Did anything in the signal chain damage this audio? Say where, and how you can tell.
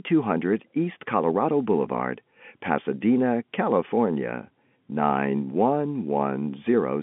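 No, nothing in this speech stood out as damage on listening.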